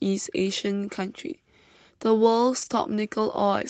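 At 2.61 to 2.71 s, a lost packet rebuilt from error correction: a 60 ms stretch, fitting about three dropped Opus packets, was played from the low-bitrate backup copies. There is no gap, but the speech turns briefly rougher and noisier, appearing on the spectrogram as smeared, grainier harmonics beneath the call path's 8 kHz ceiling.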